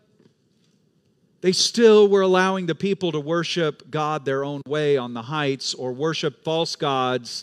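No technical faults are audible.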